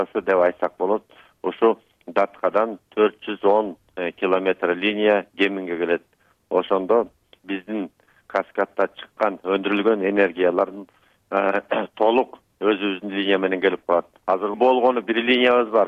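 There are no technical faults to describe in this clip, so there is nothing to place in time order.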